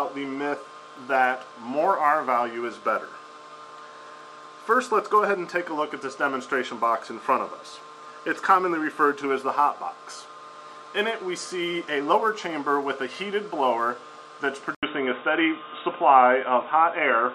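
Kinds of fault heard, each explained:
Input switched to a poorer device: At 14.75 s the sound drops out for 80 ms, then returns dull and boxy, with nothing above 3.8 kHz. A new, faint noise floor appears and the level shifts a few decibels. A changed input is the likely cause.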